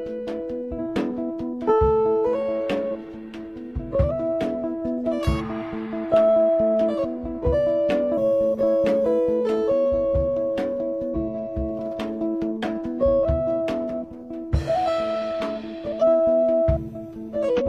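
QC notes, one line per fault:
0.75–0.80 s, 8.13–8.18 s, 11.10–11.16 s, 15.98–16.03 s, 17.56–17.62 s: damaged data in a compressed stream. Corrupt frames make the decoder lose sync, giving roughly 50 ms blips that show as vertical broadband smears on a spectrogram and abrupt waveform breaks.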